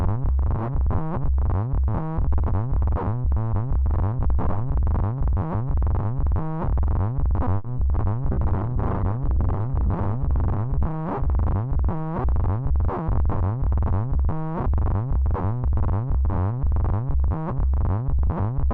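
At 7.57 to 7.66 s a short stall from a late packet holds the sound for 70 ms. The packet arrived late, the jitter buffer emptied, and the receiver stretched the last sound until it came. Nothing is missing afterwards, and that is what separates it from a loss.

Just after, at 7.76 to 7.79 s, comes a short concealed packet loss. Here 40 ms of audio never arrived in time, and only 10 ms was filled in by continuing the last sound. The rest is simply gone, so the sound smears and skips ahead, and the delay shrinks by roughly 30 ms.

From 7.92 to 8.15 s a jitter buffer slow-down plays the audio at 88% speed, adding 36 ms. The receiver repeated tiny pieces many times in a row to build a reserve. The sound is drawn out at unchanged pitch, not frozen in one spot the way a stall is.

From 8.32 to 13.40 s a call bitrate drop takes the encoder from 48 kbps down to 11 kbps. The lowest rate lasts about 1.6 s, and the top of the band falls from 20 kHz to 12 kHz. 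The sound turns coarse and duller, and this is a change in tone, not in timing. It clears by 13.4 s.

Inside that stretch, from 12.08 to 13.07 s, a jitter buffer speed-up runs the audio at 107%, removing roughly 70 ms. The receiver cut short pieces to shed excess delay, so the sound hurries along at the same pitch. It is the opposite of the earlier slow-down.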